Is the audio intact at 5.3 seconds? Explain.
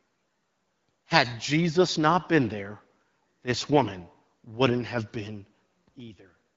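Yes, the speech at 5.3 seconds is intact, carried through the AMR wideband (HD Voice) codec at 12.65 kbit/s with no fault at that moment.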